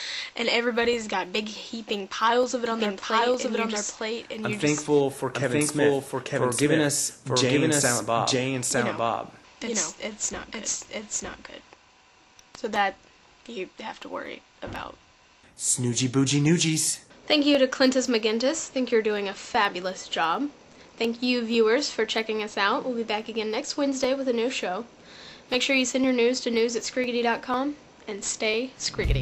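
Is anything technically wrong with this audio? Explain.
Yes. From 2.66 to 11.74 s, a doubled audio track: an equal-level copy trails by about a second, likely from a slower capture path, starting abruptly without echo's decay.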